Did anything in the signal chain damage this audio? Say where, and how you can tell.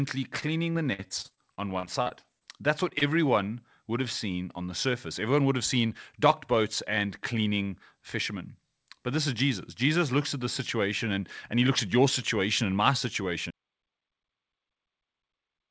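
Yes. From 0.40 to 2.43 s the speech turns choppy, a case of repeated packet loss (robotic sound). At the network and jitter-buffer stage, about fifteen holes arrive in quick succession, the longest 56 ms. Each one is patched by stretching the preceding sound, and about 16 percent of that stretch ends up synthesised rather than received. The next gap lands before the voice settles, so it comes across as choppy, with pieces missing.

Shortly after, two brief smears at 2.89 s and 2.99 s mark short concealed packet loss. In each case roughly 20 ms of the stream missed the decoder, and the receiver bridged it by extending the last waveform before fading back into the real signal. The patches are short enough to sound like a tiny wobble rather than a break. A quick consonant can get swallowed in the process.

At 13.51 s, right after "your situation and my", the audio drops out to silence and stays that way to the end, about 2.2 s of silence with no room tone. 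That absence of background noise points to the capture side rather than the network. The likely cause is a lost input, such as a disconnected device, a failed link or a mute, while the encoder kept writing silence. The call path itself, a G.722 codec with nothing above 8 kHz, is audible as that bandwidth ceiling and its usual coding noise.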